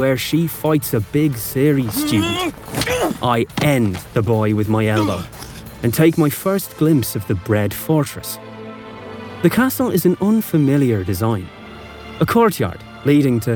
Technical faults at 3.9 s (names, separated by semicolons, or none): none